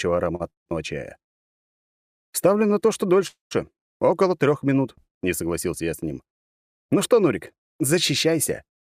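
The audio has one short stall from a late packet and two call audio freezes, all early to mid clip. At 0.35 to 0.42 s the last sound is simply held for about 46 ms, with a slight buzz or dip, before the audio resumes exactly where it left off. Nothing is lost, but everything after it now runs about 46 ms later. The jitter buffer ran dry only briefly, so the stretched sound never decays into silence.

That decay is what sets the call audio freezes apart. At 0.50 to 0.68 s and again at 3.27 to 3.53 s the held sound fades, and each ends in about 140 ms of silence. The first freeze fills 161 ms and the second 239 ms. In both cases the audio picks up from the same point with nothing missing, so each freeze pushes the rest of the clip later by its own length. This pattern is most likely packets held up in transit long enough for the receiver's concealment to run out.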